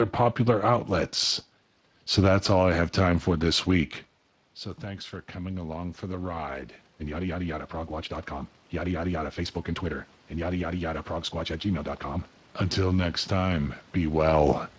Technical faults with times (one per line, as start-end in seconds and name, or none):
0.00-14.78 Speex codec
4.83-8.18 automatic gain rising
8.71-11.94 automatic gain rising